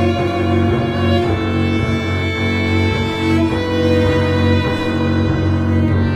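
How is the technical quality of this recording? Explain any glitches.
Nothing here trips any alarms; the recording runs along without a single glitch worth pointing at.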